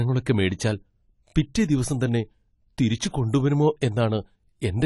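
From start to finish the speech sounds dull and smeared, with nothing above 11.4 kHz and a fizzy, watery edge on sibilants. That's likely AAC compression, with AAC-LC at a low rate, something that fits roughly 32 kbps, throwing away detail against its hearing model.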